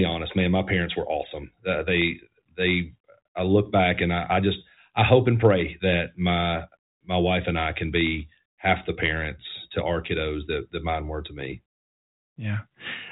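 Speech over a 40 kbit/s G.726 ADPCM telephone path with nothing above about 3.8 kHz, and no technical faults.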